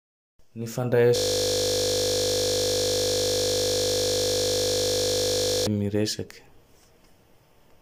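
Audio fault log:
1.16–5.67 s system hang loop: one 20 ms slice of speech repeats about 225 times as playback freezes, giving a steady 50 Hz buzz. The spectrogram shows rigid harmonic stripes, and the waveform shows an identical repeating cycle.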